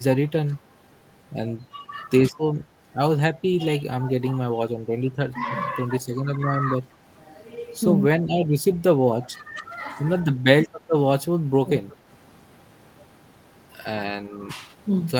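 At 0.45 to 0.65 s, 2.36 to 2.43 s, 3.32 to 4.45 s, 9.26 to 9.6 s, 10.22 to 10.89 s, 11.22 to 12.07 s and 14.15 to 14.41 s, the speech dips in level, mildly in some places and deeply in others. The deepest dips are around 3.3 to 4.5 s and 11.2 to 12.1 s. This is likely speech suppressed in double talk: an echo canceller mistook the talker for loudspeaker echo while the far side spoke. Unlike a packet dropout, the voice thins and sinks in patches rather than vanishing abruptly.

At 11.9 to 11.96 s, inside one of those dips, a brief, faint repeat of the speech trails the original by 179 ms, well below the main voice. It is likely echo leak, residue the far-end canceller failed to remove. The distinct delay sets it apart from room reverberation, which smears continuously rather than returning as a separate late copy.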